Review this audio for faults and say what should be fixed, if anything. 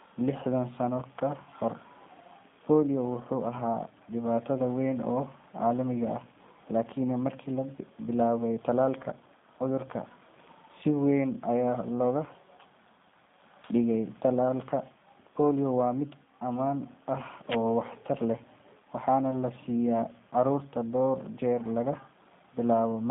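Throughout, the speech sounds rough and synthetic, held between 150 Hz and 3.6 kHz with nothing above 3.7 kHz. This is G.729 codec damage: the speech is rebuilt from a filter, pitch predictor and sparse pulses, which fits an 8 kbit/s stream. To prevent it, capture the speech through a wideband codec or record it locally instead of over a narrowband telephone link.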